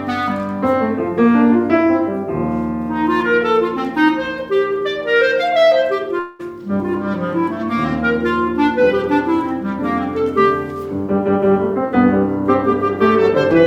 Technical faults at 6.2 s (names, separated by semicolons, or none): long network dropout